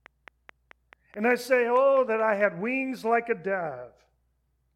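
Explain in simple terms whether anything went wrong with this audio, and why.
A train of clicks runs from 0.06 to 2.42 s: about ten near-identical ticks, evenly spaced at nearly five per second, likely from interference or a faulty connection or power supply, unlike random crackle.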